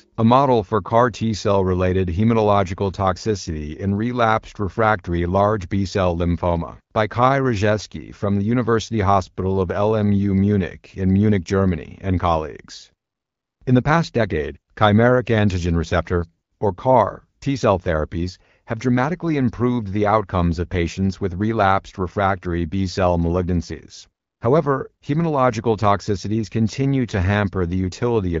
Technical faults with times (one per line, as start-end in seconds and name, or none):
none